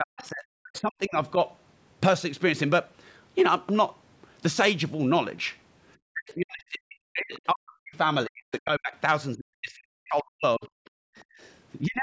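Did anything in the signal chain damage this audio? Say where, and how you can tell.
Yes. The damage is in the call processing, at the echo canceller.

Speech suppressed in double talk: the speech sinks by about 40 dB within 0.00–1.36 s, 6.12–7.95 s, 8.27–8.93 s and 9.36–10.63 s. At 11.81–12.02 s it sinks by about 25 dB. On a spectrogram the harmonic bands fade or break off. The waveform envelope collapses instead of tapering naturally. This is likely the canceller hearing both sides at once and suppressing everything it couldn't separate.

Other side's voice leaking through: a faint second voice appears at 7.34–7.40 s, about 30 dB below the main speech. It returns at 10.63–10.88 s, about 25 dB down. A spectrogram shows weak, disconnected harmonic traces with a different pitch contour. The waveform shows only low ripples. This is likely loudspeaker playback of the far end that the canceller failed to subtract from the microphone.

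Background gated by the echo canceller: from 10.91 to 11.39 s the room tone drops by about 40 dB, for roughly 400 ms in total, then comes back. On a spectrogram the broadband noise floor goes nearly blank for that stretch. The waveform flattens to almost nothing between events. The canceller clamped down on the microphone while the loudspeaker was active and released afterward.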